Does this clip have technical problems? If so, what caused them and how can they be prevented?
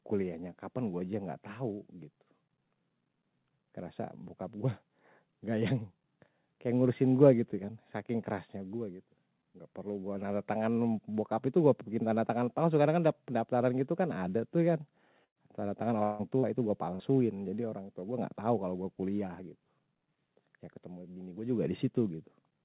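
Yes. The speech, carried over a call path whose codec points to G.711 mu-law with nothing above 4 kHz, has four packet-loss faults between about 15.2 and 17.0 s.

Two bursts of packet loss occur, at 15.24–15.38 s and at 16.95–17.03 s, just after "itu gue". In the first, about 120 ms of audio went missing. The receiver extended the last sound for roughly 114 ms, fading it down, leaving about 90 ms near-silent before speech resumed further on. In the second, about 40 ms is lost and bridged over roughly 47 ms. A larger jitter buffer and forward error correction or redundant packets would prevent these.

From 16.03 to 16.22 s the last sound stretches on and decays for about 156 ms. It never falls fully silent, and speech returns with about 160 ms skipped. The likely cause is a long network dropout, where no packets arrived for that stretch. Stable routing and reliable, uncongested connectivity prevent this.

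A short concealed packet loss at 16.39–16.46 s, just before "itu gue", leaves about 40 ms missing. That gap was covered by roughly 38 ms of extrapolated sound blended back in, heard as a brief smear. Prioritising call traffic with QoS and adding packet redundancy would prevent it.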